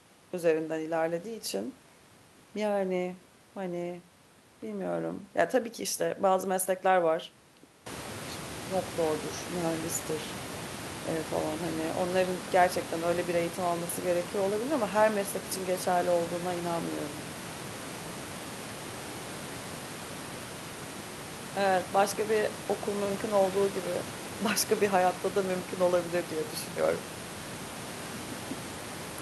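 No technical faults can be heard in the speech. The room's background noise rises by about 18 dB at around 8 s and then sits about 13 dB below the speech, which comes from the recording space rather than from the system.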